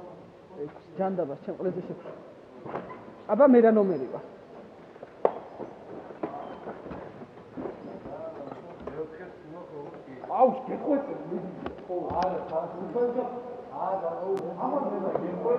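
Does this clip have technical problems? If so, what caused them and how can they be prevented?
Yes: a single loud pop from 14.37 to 14.41 s, about 10 dB above the signal, most likely a voltage step from a plug, switch or static discharge. Secure connections and mute before switching.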